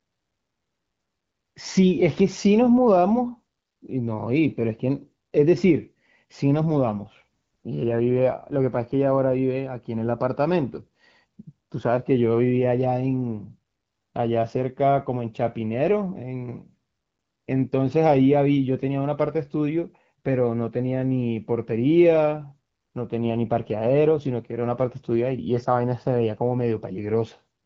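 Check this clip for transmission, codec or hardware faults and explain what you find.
Two AMR rate drops, both in speech carried over AMR wideband (HD Voice), which at its normal setting sounds clear with only light coding texture.

From 6.67 to 9.55 s, and again from 23.17 to 24.32 s, the voice turns rougher, raspier and more synthetic, with no gap and no loss of bandwidth. The quality change points to the codec stepping down from about 12.65 to about 8.85 kbit/s, as the link trades speech bits for error protection, before returning to the higher rate.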